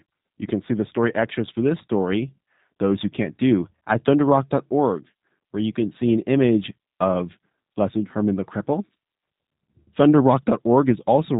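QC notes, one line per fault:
throughout, G.729 codec: the speech sounds dull, with nothing above 3.8 kHz, and plainly rough and synthetic. The codec rebuilds each 10 ms frame from a vocal tract filter, a pitch predictor and a few pulses, which fits 8 kbit/s G.729.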